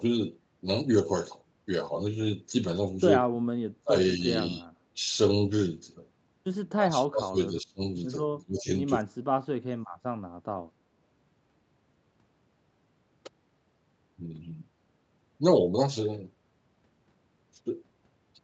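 Speech suppressed in double talk: the voice dips at 3.33 to 3.5 s, 3.82 to 3.95 s, 4.18 to 4.25 s and 4.54 to 4.67 s, then more deeply at 6.7 to 7.81 s, 8.4 to 8.69 s and 9.01 to 9.86 s, where it drops by around 30 dB and nearly vanishes. The likely cause is an echo canceller that could not separate the near-end voice from the far-end echo during overlapping talk and attenuated both.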